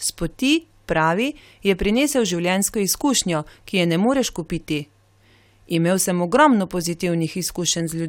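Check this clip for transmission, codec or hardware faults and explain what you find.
Nothing stood out on listening to this speech recording.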